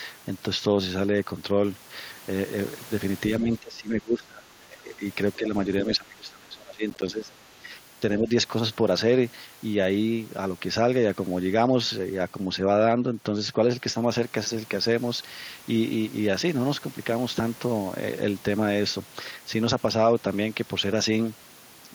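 Speech suppressed in double talk runs from 3.38 to 5.05 s, again at 5.36 to 5.54 s, and from 5.84 to 7.31 s. The speech dips by up to about 20 dB, about 10 dB in the short middle stretch, and thins and breaks up in pieces. The likely cause is the echo canceller failing to separate the talker from loudspeaker echo while both sides spoke, so it turned both down.

Processor overload crackle sits inside that last dip, at 6.9 to 7.08 s. A handful of short audio buffers, each around 10 ms, missed their deadlines and were replaced by silence. The hard-edged gaps run together into a brief gritty crackle that stops when the load eases.

The other side's voice leaking through appears at 7.3 to 7.49 s as a faint scrap about 35 dB below the speech. This is likely far-end audio from the loudspeaker that the echo canceller did not fully remove from the microphone.

Speech suppressed in double talk returns briefly at 7.58 to 7.66 s, with a drop of about 10 dB, and at 8.2 to 8.3 s, with a drop of about 5 dB. 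Each is a quick dip in level.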